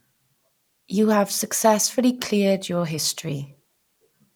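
Listening to this short speech recording, nothing technical stood out as wrong at any point.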